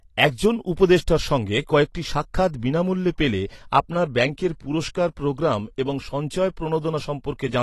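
Throughout, the speech is dull and smeared, empty above 12.1 kHz, with warbling sibilants that low-pass filtering wouldn't cause: likely AAC compression, fitting 32 kbps.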